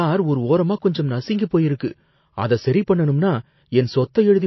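Throughout, the speech sounds watery and swirly with nothing above 5.8 kHz, likely MP3 compression starved of bits, which fits a bitrate near 28 kbps.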